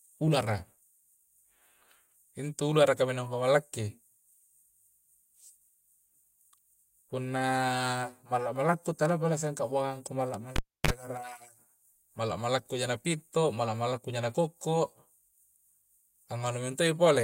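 A speech recording with one fault: a cable pulled and plugged in. At 10.56 s a pop cuts the sound. Near silence follows for about 0.30 s while the live lead is out. Then a 41 ms burst of 50 Hz mains buzz comes in. That is the plug tip touching before it seats, so the open input picks up hum. A second pop marks full contact, and the speech resumes at 10.91 s.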